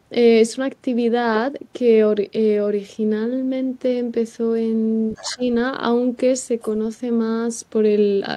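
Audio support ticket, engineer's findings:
Other side's voice leaking through, 5.15 to 5.43 s and 6.61 to 6.70 s. A faint second voice sits well under the talker, weaker on the second burst. Likely cause: echo canceller leaving residual loudspeaker echo in the microphone path.

Speech suppressed in double talk, 5.23 to 5.42 s, overlapping the first leak. Talker level dips hard, roughly 20 dB at worst, for around a tenth of a second in total. Likely cause: echo canceller confusing near talker with echo during crosstalk, attenuating both.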